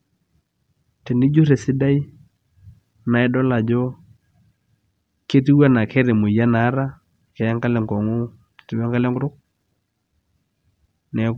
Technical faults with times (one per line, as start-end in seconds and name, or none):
none